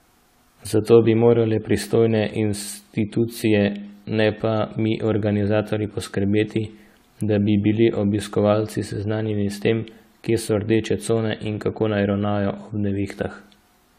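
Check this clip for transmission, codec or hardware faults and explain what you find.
Generation loss runs through the whole clip. The speech sounds swirly, smeared and hollow, consonant attacks blur, and nothing is heard above 16.4 kHz. The likely cause is repeated lossy re-encoding, around seven passes, in a way that fits a 64 kbit/s AAC-LC chain. Each decode and re-encode quantises the signal again on a shifted frame grid, so noise and spectral gaps pile up well beyond what one pass at that bitrate would leave.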